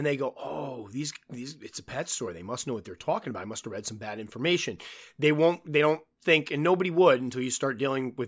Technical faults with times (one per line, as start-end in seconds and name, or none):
none